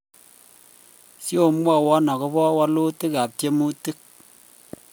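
No technical fault can be heard anywhere in the recording.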